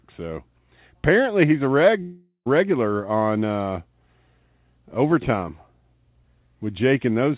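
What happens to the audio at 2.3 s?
From 2.02 to 2.48 s the last sound stretches into a fading buzz, then brief silence. That's likely a long network dropout, and that stretch of audio is lost.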